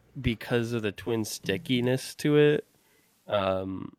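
Speech. Just after "because of the", at 0.92 s, a digital radio blending to analogue fault begins: a 290 ms cross-fade switches to the FM broadcast, adding hiss roughly 40 dB down and shifting level about 2 dB until 3.49 s.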